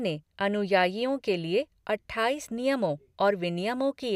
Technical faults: none

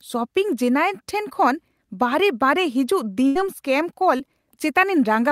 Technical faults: burst of packet loss; short concealed packet loss

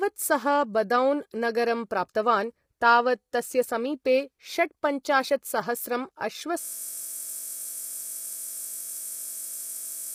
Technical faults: low-delay AAC compression; system hang loop

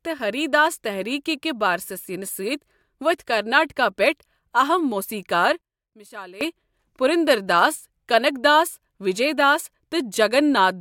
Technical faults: one channel inverted

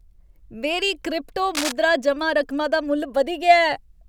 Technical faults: cable scratch noise

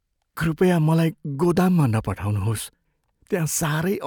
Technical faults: none

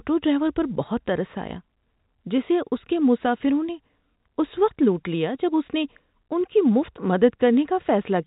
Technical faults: none

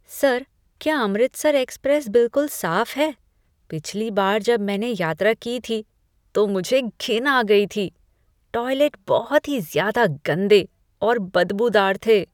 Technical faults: none

